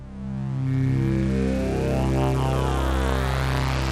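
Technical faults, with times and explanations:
0.67 s to the end, at 3.91 s: periodic clock jitter. Something is wobbling the converter's sample clock at a steady rate of around 2 kHz, so every frequency in the sound picks up copies sitting about 2 kHz above and below it. The upper parts of the sound get hit hardest, which gives it that gritty, metallic fringe, and it drops out whenever the sound itself goes quiet.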